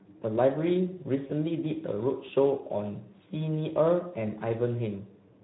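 From the start, the speech sounds hoarse and grainy, with a noisy rasp on voiced sounds and a thin, hissy top end. This is the Speex codec: its CELP coder has too few bits to model the excitation accurately, so the voice takes on a rough, noisy texture. The highest frequencies come back as shaped noise rather than real detail. The damage is plainly audible and fits a setting around 11 kbps.

At 1.27 s the sound is briefly stretched and fades until about 1.32 s. This is VoIP packet loss concealed by the speech codec. When about 20 ms of data went missing, which fits a single lost frame, the decoder repeated its last pitch and filter at falling gain to fill the gap. Because each decoded frame depends on the one before, the speech sounds weak or distorted for a short stretch after the gap.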